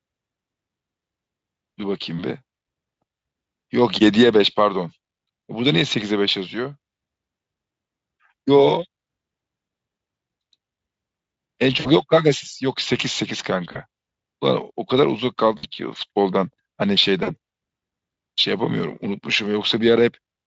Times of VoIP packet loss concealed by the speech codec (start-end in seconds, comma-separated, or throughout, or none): 11.79-11.93, 13.71-13.78, 15.57-15.66, 17.23-17.30